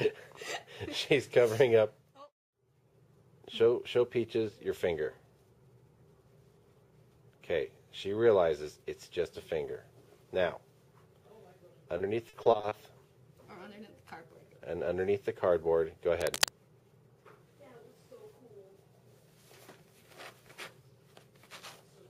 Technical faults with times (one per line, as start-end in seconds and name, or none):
11.97-12.73 repeated packet loss (robotic sound)
16.20-16.50 cable scratch noise